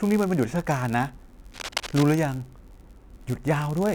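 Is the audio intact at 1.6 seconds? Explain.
No. Cable scratch noise runs from 1.52 to 2.03 s. Rough, uneven bursts of scratching sit roughly 10 dB below the speech, likely from a worn contact shifting resistance as it moved. A block size mismatch (padded) also runs throughout: zero-filled gaps at the end of each block cause a 91.5 Hz buzz and slow the speech to 0.996 times normal speed.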